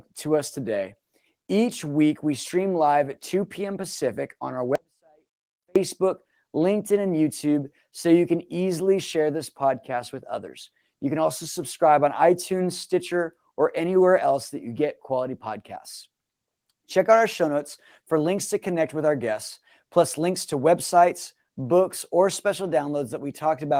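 Right after "on our", at 4.75 s, the speech drops out for about a second, coming back at 5.76 s. It's an audio dropout to a faint residue: the cut is sudden, not a pause or fade, and the gap isn't silent but holds a faint trace of sound, very roughly 40 dB down. The likely cause is the signal feed breaking while the path downstream stayed live. The Opus coding damage is light.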